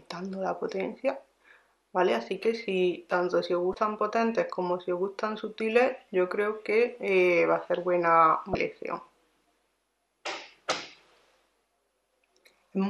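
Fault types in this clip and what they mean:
Damaged data in a compressed stream: corrupted bytes throw the decoder out of sync. Short blips, about 30 ms each, break the sound at 3.71, 8.52 and 10.69 seconds.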